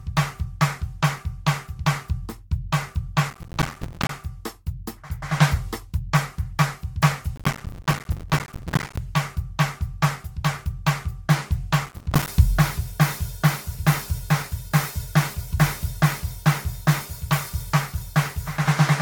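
Music, with generation loss throughout: the sound is swirly, smeared and hollow, with blurred attacks and nothing above 19.4 kHz, likely from Vorbis re-encoding repeated roughly seven times. Processor overload crackle at 3.30–4.13 s, 7.36–8.98 s and 11.86–12.28 s: gritty bursts of tiny silent dropouts, pointing to missed deadlines on audio buffers of around 5 ms.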